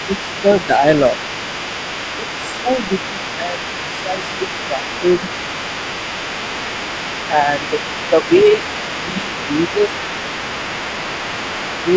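From the start and throughout, a second voice sits faintly under the main talker, well below it in level. This is other side's voice leaking through. The far end likely plays on a loudspeaker, and the echo canceller leaves some of it in the microphone signal.

The main voice dips briefly at 0.42 to 0.84 s, 2.6 to 5.03 s, 7.31 to 7.72 s and 8.1 to 8.3 s. It dips more deeply at 9.0 to 9.98 s. This is speech suppressed in double talk. Both sides likely overlap, and the canceller turns the talker down with the echo.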